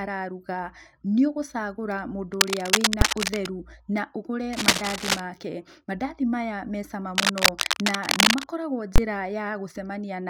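Cable scratch noise runs from 2.33 to 3.47 s after "araruga nĩũgũcagũra", from 4.53 to 5.20 s after "na ũgũre", and from 7.15 to 8.44 s after "maya mecama". It is dense, uneven rustling a little louder than the speech, likely from a worn cable or connector being moved. At 3.01 s, inside the first scratch, and again from 8.96 to 8.98 s, invalid numbers at full scale produce a single hard bang. A processing block, consistent with 256 and then 1024 samples, was forced to maximum level.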